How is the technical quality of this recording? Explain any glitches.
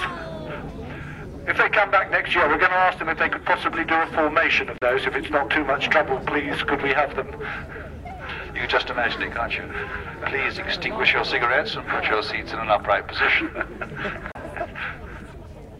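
The recording has two brief digital broadcast dropouts. At 4.78 s and again at 14.32 s, the sound fades out in about 3 ms and stays silent for roughly 32 ms, consistent with a single lost frame. The receiver muted until valid frames returned. A waveform shows a sharp notch of near-silence, and a spectrogram shows a thin vertical gap across all frequencies.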